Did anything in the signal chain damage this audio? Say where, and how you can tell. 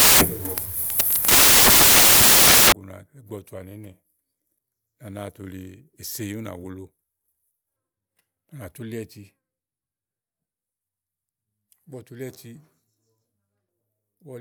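Yes. From 0.00 to 2.72 s the speech is buried under loud, harsh broadband noise from samples built from the wrong bytes, a sample-format conversion fault. Each sample's bytes were assembled out of order or misaligned, so the rapidly changing low bits became the large part of each value. The waveform is a dense block, and the spectrogram shows broadband energy filling every band.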